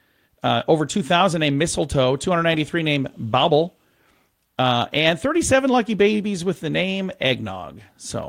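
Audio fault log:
Throughout: clock drift between sender and receiver. The sending side's audio clock runs fast, by roughly four percent. More samples arrive than the receiver plays out. Its jitter buffer keeps filling. The receiver has to shed material to stay in step. This sets up small timing hiccups across the whole clip. They come at uneven intervals, because each correction waits until the buffer has crept far enough.
0.05 to 7.63 s: repeated timing corrections. Through this stretch the receiver trims short pieces of the speech. Every edit goes the same way, removing audio rather than repeating it. The net effect is playback about 5 percent faster than it should be. Each cut is tiny. It shows up as a slight skip or a tempo that feels hurried and not quite even. The spacing between cuts is irregular.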